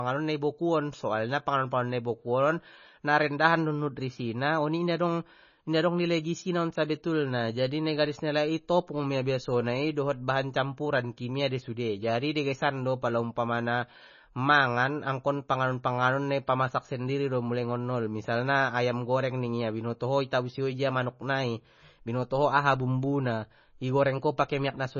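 Throughout, the speech sits under a hard ceiling at 6.9 kHz with watery, swirling sibilants and smeared attacks, unlike a plain low-pass filter. This is likely heavy MP3 compression, fitting a very low bitrate near 24 kbps.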